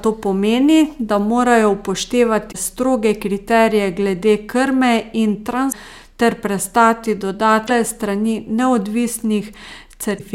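At 2.50, 5.68, 7.64 and 10.15 s you get a brief squawk, about 56 ms each time: damaged data in the compressed stream. The decoder hits corrupted frames, misreads them and loses sync, and the garbled output sounds like a chirp.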